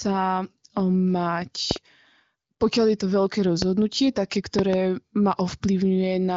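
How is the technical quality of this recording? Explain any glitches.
The recording is marred by three bursts of loud pops standing well clear of the speech, carried over a wideband phone channel that stops near 7.5 kHz without audible roughness, which fits AMR wideband (HD Voice) coding at a high rate such as 23.05 kbit/s.

Loud pops occur at 1.71 to 1.78 s (a double pop), 3.62 to 3.64 s (a single one) and 4.59 to 4.76 s (another double), each peaking about 15 dB above the speech. The likely cause is a sudden voltage pulse, from a plug, switch, static or driver glitch, that the following circuits shape into a sharp thump. Unlike a dropout click, the speech carries on underneath without a gap.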